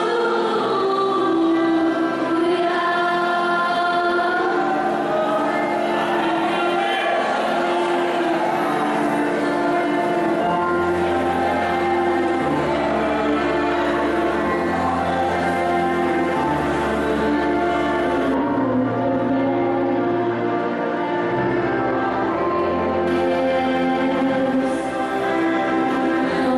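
From 18.34 to 23.08 s the sound turns dull and muffled, about 13 dB down at 10 kHz: de-emphasis applied wrongly, cutting treble without pre-emphasis.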